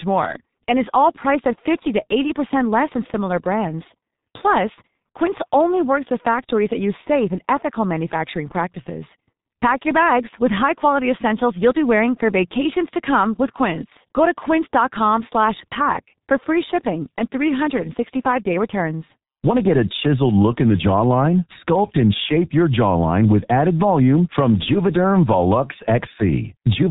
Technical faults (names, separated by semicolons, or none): G.723.1 codec